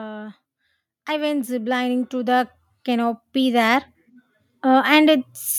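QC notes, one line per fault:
1.06–3.91 s and 4.62–5.40 s, automatic gain rising. The automatic gain control treated the input as too quiet and slowly raised its gain. Speech and background swell together, by about 11 dB over nearly three seconds, then by about 3 dB.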